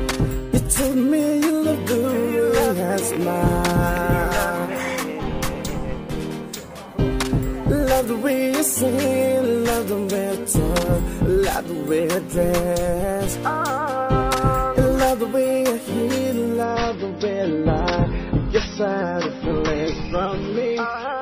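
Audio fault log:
16.63 s to the end, adaptive stream at a lower bitrate: the quality drops abruptly with no gap, as if the player switched to a much leaner rendition when the connection slowed. Everything above 5.9 kHz is gone, so the top end turns dull, and compression artefacts rise. The sound is consistent with a switch from MP3 at around 128 kbit/s down to roughly 24 kbit/s.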